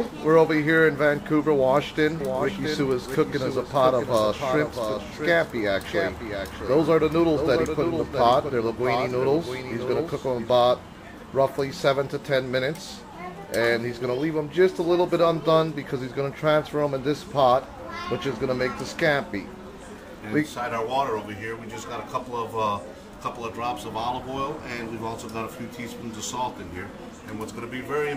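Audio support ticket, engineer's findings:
Doubled audio track, 2.20 to 10.54 s. Full-band duplicate of the sound trailing the original by around 0.7 s, roughly 5 dB lower, with no decay or room colour. Copy starts and stops abruptly at both ends. Waveform: envelope shape repeated at a fixed offset. Spectrogram: every feature ghosted at a constant lag. Likely cause: a second capture via a slower path, or an edit holding two out-of-step copies.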